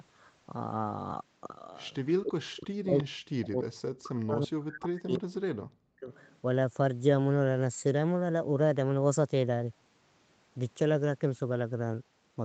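A speech recording carries an echo leak and speech suppressed in double talk. Three faint delayed copies of the voice trail in at 1.80 to 2.12 s, at 2.98 to 3.04 s and at 6.14 to 6.38 s, each lagging by 337 ms and sitting roughly 20 to 35 dB below the live speech. The likely cause is a loudspeaker on the far end whose echo canceller let part of its microphone pickup return down the line. On a spectrogram this shows as weak copies of earlier harmonic patterns shifted a third of a second to the right, and in the waveform as low-level ripples riding under or just after the main signal. The voice also sinks from 2.19 to 3.66 s and again from 3.96 to 6.12 s, dropping by as much as 40 dB. That points to an echo canceller that could not tell the local talker from the returning echo while both sides spoke, and so pulled both down. The waveform envelope collapses into gaps and shrunken stretches across those spans, while the spectrogram shows the harmonics and upper energy fading out in patches. 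The Opus call path keeps everything below 8 kHz, so a clean upper edge runs along the spectrogram at that frequency.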